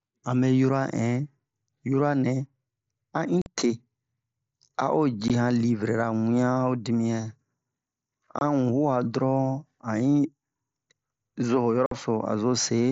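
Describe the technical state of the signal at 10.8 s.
At 10.8 s the speech is intact, with no fault present, carried through the wideband Bluetooth mSBC headset codec as it normally sounds.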